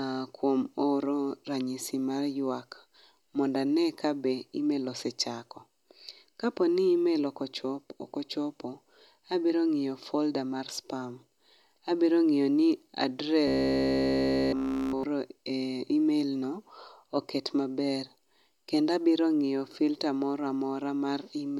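Speech, with robotic sound from repeated short buffers between 13.48 and 15.03 s. Across that span the voice collapses into a rigid, metallic buzz at a fixed 66.7 Hz, present throughout the stretch, while the phrasing still roughly tracks. That pitch matches a 15 ms period, so the likely cause is audio arriving too seldom and a 15 ms buffer being replayed in its place. Unlike codec warbling, the buzz pitch stays locked regardless of the speaker's intonation.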